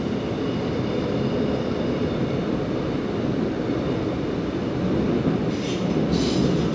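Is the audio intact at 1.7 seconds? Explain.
Yes, the audio at 1.7 seconds is intact, with no audible fault at that moment.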